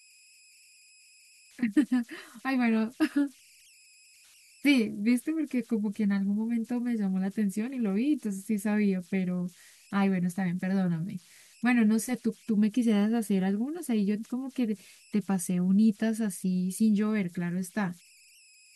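Converter idle tones run throughout this speech clip: a whistle near 3 kHz sits in the pauses, with grainy noise under quieter passages, about 31 dB below the speech. An undithered delta-sigma converter falls into repeating bit patterns on small input, producing offset-dependent tones.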